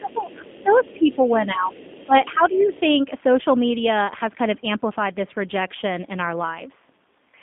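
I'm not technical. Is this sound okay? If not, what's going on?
No. The whole clip has the sound of the G.729 codec, a low-bandwidth phone codec that cuts the top end and makes the voice a bit rough and synthetic.

There's also faint leakage of the other side's voice: a second voice creeps in from 0.01 to 0.93 s, 1.11 to 1.32 s, 1.71 to 2.06 s and 2.22 to 2.80 s, likely because echo cancellation missed some of it.

Then there's speech suppressed in double talk. From 0.63 to 1.71 s and again from 2.06 to 2.73 s, the main voice gets noticeably quieter and patchy, likely while both sides talk at once.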